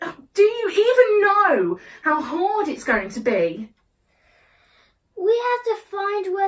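Nothing in this audio stands out as a technical fault; it simply runs along without a hitch anywhere you listen.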